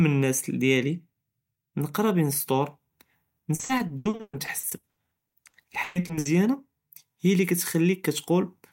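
From 3.55 s to 6.27 s the speech breaks up with repeated packet loss (robotic sound). About two dozen holes follow in quick succession, the longest 120 ms. Each is patched by extending the last sound. The stretch turns choppy, with pieces missing.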